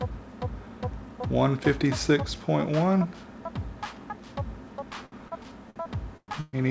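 Packets on the call's receive side arrived late or slower than playback between 5.06 and 6.55 s, so the jitter buffer kept draining and the receiver stretched the last sound to bridge each shortfall. The result is repeated stalls (stutter): about seven hitches, the longest around 130 ms, adding roughly 0.43 s of concealed sound, close to a third of that stretch. Nothing drops out, but the audio drags and catches. The bandwidth stopping at 8 kHz fits the G.722 call codec at 64 kbps.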